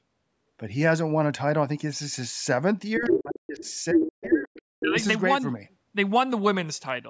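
From 2.95 to 3.23 s a second voice comes through at roughly the same level as the speech. This is the other side's voice leaking through, likely echo from a loudspeaker that the echo canceller failed to remove. It returns at 3.59 to 3.73 s about 20 dB down, at 3.95 to 4.38 s about 5 dB above the speech, and at 4.54 to 4.62 s about 25 dB down. On a spectrogram these bursts show as overlapping harmonic patterns within the band, which ends near 8 kHz from the call's microphone filtering.

Overlapping these bursts, the main speech is suppressed in double talk: at 2.98 to 3.66 s by as much as about 40 dB, at 3.93 to 4.51 s by about 30 dB, and at 4.79 to 4.96 s by about 20 dB. The echo canceller could likely not tell its own talker from the echo, so it turned both down. In the waveform the envelope sinks abruptly, and the spectrogram shows the speech energy thinning or disappearing in patches.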